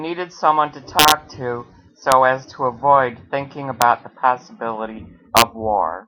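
Integer overflow cracks this speech at 0.99 to 1.12 s, 2.12 s, 3.82 s and 5.37 to 5.42 s. Loud peaks wrap to the opposite sign. They snap violently.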